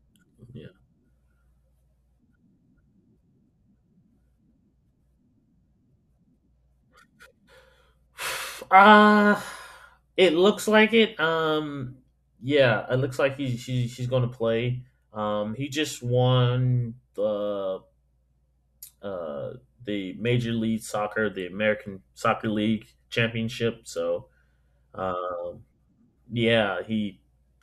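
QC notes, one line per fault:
Nothing to flag on this speech recording, so there's no fault to log here.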